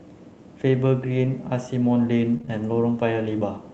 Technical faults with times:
1.21-2.59 scattered short gaps

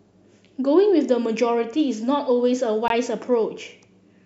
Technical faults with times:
2.88-2.90 gap between stream segments

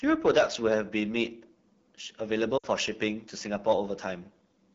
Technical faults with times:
0.00-4.74 AMR wideband (HD Voice) codec
0.26-1.24 hard clipping
2.57-2.67 lost AMR speech frames
3.68-3.72 hard clipping

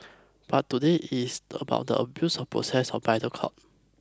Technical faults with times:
none

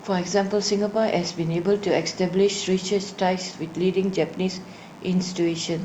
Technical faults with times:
0.00-5.85 DECT cordless phone buzz

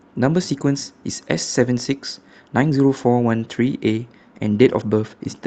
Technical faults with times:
0.00-5.46 clock drift between sender and receiver
0.29-5.43 repeated timing corrections

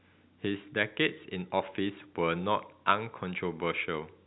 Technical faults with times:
none

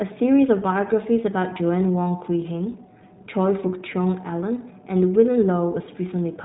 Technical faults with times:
0.00-6.44 iLBC codec

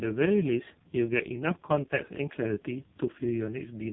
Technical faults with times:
0.00-3.92 AMR narrowband mobile codec

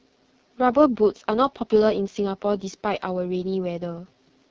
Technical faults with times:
0.00-4.50 AMR wideband (HD Voice) codec

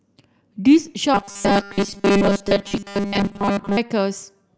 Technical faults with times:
1.14-3.77 robotic sound from repeated short buffers

